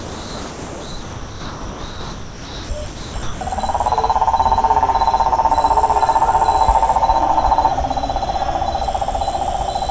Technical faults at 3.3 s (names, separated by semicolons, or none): sound dropped by the voice detector